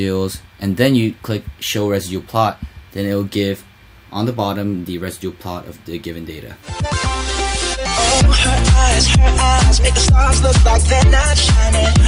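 At 9.59 s a brief watery blip breaks through: DAB burbling, where sparse bit errors slipped past error correction and put short blips of noise into single MP2 sub-bands.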